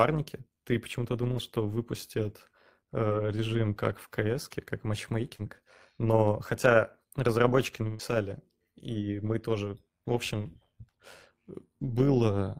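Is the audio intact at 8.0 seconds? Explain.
No. Right after "хотя разработчики" there's a burst of packet loss from 7.87 to 8.02 s. The receiver stretches the last sound and fades it, then jumps ahead with about 120 ms missing. On top of that, the overlap-add ripple running through the whole clip is there too. The frame overlap doesn't sum evenly, so the level pumps by about 6 dB around a hundred times a second, giving a metallic buzz with extra tones around each note.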